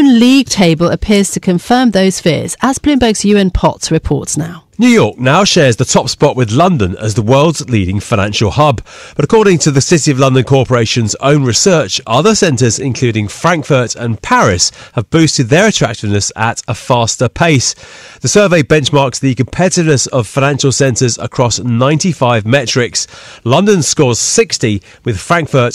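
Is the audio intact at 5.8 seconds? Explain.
No. At 5.8 seconds, as throughout the whole speech clip, the loudest moments carry a brittle crackle, a gritty edge that sits on the peaks. This is hard clipping: the signal is driven about 6 dB past what a stage in the chain can pass, so its peaks are sliced flat. Only a small fraction of samples are cut, but those flat tops spray harmonics high into the spectrum.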